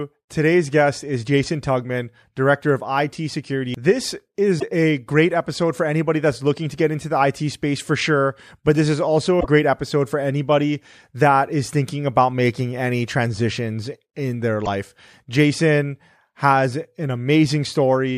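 Brief glitches cut through this speech recording at 4.56 to 4.63 s, 9.37 to 9.46 s and 14.62 to 14.67 s, each under a tenth of a second. They come from damaged data in a compressed stream: the decoder misreads corrupted frames and loses sync until the next valid frame header.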